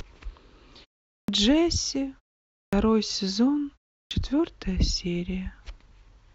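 Clipped start after a pause affects this speech clip at 1.23 s, 2.67 s and 4.05 s, each following a silence of roughly 0.4 to 0.55 s. The output device drops into sleep during the gap and needs time to wake, so about 53 to 58 ms of onset vanishes and words begin abruptly, missing their first sounds.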